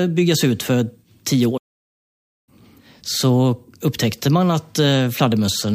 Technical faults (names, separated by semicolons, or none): playback stall